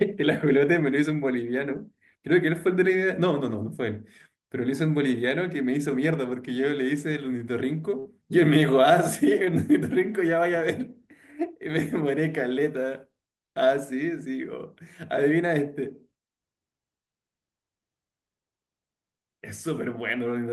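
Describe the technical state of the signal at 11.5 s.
At 11.5 s the speech signal is intact, with no dropout, glitch or distortion, and the call codec path carrying it is working as expected.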